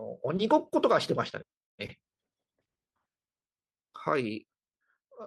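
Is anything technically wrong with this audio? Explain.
Yes. From 3.94 to 5.16 s the speech is turned down by roughly 10 dB, and the gain control applies that drop in coarse steps, about fifty per second, rather than as a smoothed ramp. Each abrupt jump in gain puts a tiny discontinuity into the waveform, and together they produce zipper noise: a fast, buzzy ticking laid over the speech for as long as the level is moving.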